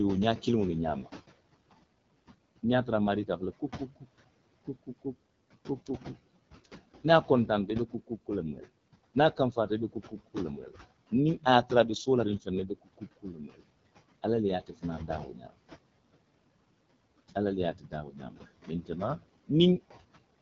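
From the start, noise suppressor artifacts are present. The room noise, which sits about 16 dB below the speech, is pulled down by about 21 dB between phrases and comes back under each one.

The whole clip also carries the AMR wideband (HD Voice) codec sound. Nothing is present above about 6.8 kHz. The voiced sounds are rough and raspy in a way that is plainly audible, which points to one of the lowest AMR-WB modes, around 8.85 kbit/s.

Speech cut by the noise suppressor happens five times, where the suppressor treated parts of the speech as noise:
2.63 to 4.07 s, a drop of up to about 14 dB over roughly a fifth of a second in total
4.67 to 5.06 s, up to about 20 dB over about a tenth of a second
6.65 to 13.63 s, up to about 19 dB, about one and a half seconds in total
14.23 to 15.58 s, up to about 20 dB
17.28 to 18.9 s, up to about 13 dB

In each span, the speech that was turned down sounds swallowed or faint.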